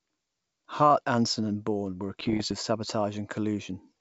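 From 2.20 to 2.55 s, bit errors on an ADPCM link break into the speech, at a rate of somewhat under one percent. Each flipped bit throws off the decoder's step size and prediction, so the damage rings on briefly. It sounds like pops, rough bursts and quick level jumps over the G.722 wideband sound.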